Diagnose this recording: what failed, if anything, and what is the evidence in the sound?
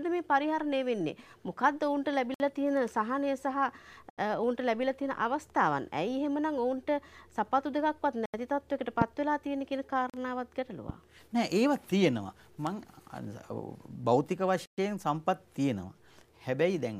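Blocks of digital silence appear at 2.34 s (57 ms), 4.10 s (80 ms), 8.26 s (80 ms), 10.10 s (40 ms) and 14.66 s (120 ms). The sound drops to silence and returns with no fade. Most lengths are whole multiples of 40 ms, which points to the driver or buffer stage missing its deadline to fill output buffers. Codec or network loss would be smoothed or concealed rather than cut to silence.

Two loud pops land at 9.02 s and 10.89 s. Each is a single sharp transient lasting about 25 ms, the first about 15 dB above the surrounding level and the second about 5 dB. Unlike the silences, the sound carries on underneath each pop instead of being removed, so these are added impulses, not missing samples. The cause is likely a voltage step in the analogue wiring, such as a loose plug, switch contact or static discharge, which the following circuits shape into a brief thump.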